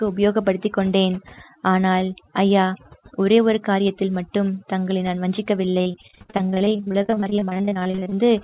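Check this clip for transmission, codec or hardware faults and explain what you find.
Two faults are present: heavy noise suppression across the whole clip, and a run of repeated packet loss near the end. The speech passes through a narrowband call codec, most likely G.711, with nothing above 4 kHz.

Overdone noise removal runs from start to finish. The suppressor was set so aggressively that frequency bands near its noise estimate are pulled down or switched off entirely, taking quiet parts of the speech with them. The background falls to near silence with twinkling specks.

Repeated packet loss (robotic sound) occurs from 5.78 s to 8.19 s. Dozens of short holes, none longer than 40 ms, arrive one after another. Each is patched by extending the preceding sound, so concealment fills about 1.1 s, roughly 44% of that stretch. The speech turns choppy, with pieces missing.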